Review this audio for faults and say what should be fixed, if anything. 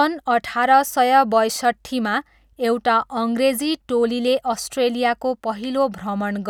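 No faults turned up in the review, so nothing needs to be fixed.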